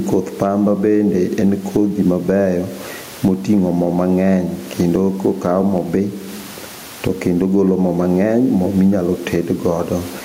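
Gain pumping throughout: the gain is likely set far too high, so a fast limiter ducks each loud syllable, swinging about 15 dB.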